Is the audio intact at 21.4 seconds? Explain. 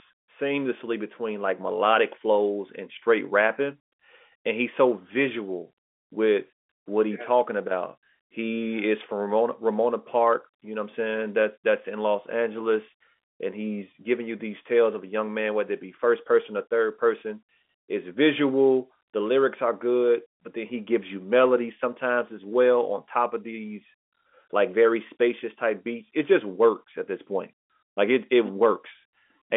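Yes, the audio is intact at 21.4 seconds: there is no dropout, click or distortion there, only the narrow telephone band of the G.711 line, with nothing above about 3.8 kHz.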